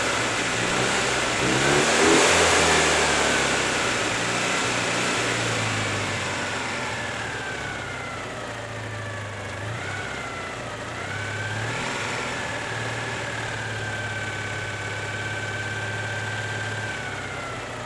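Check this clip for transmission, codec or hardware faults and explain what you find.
No faults found; nothing audible points to a problem anywhere along the signal path.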